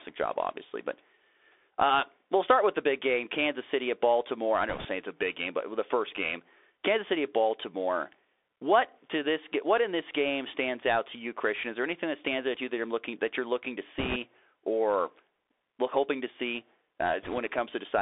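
Throughout, the speech passes through a Bluetooth CVSD headset codec, a one-bit delta modulator at 64 kHz that fits a 64 kbps stream. The line holds only 300 Hz to 3.6 kHz. The sound is thin and boxy, with plainly audible scratchy sibilants, slope-overload roughness on loud high sounds, and a granular hiss underneath.

Bit errors on a Bluetooth voice link occur from 4.69 to 4.87 s, 13.98 to 14.16 s, and 17.23 to 17.39 s. At each, a few percent of bits flip. Because each bit carries only a small step that the decoder soon recovers from, there are no sharp clicks. Instead a brief rushing crackle sits over the speech, and it is heaviest in the 13.98 s burst.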